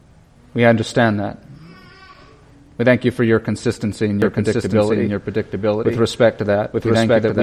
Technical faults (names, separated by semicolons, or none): doubled audio track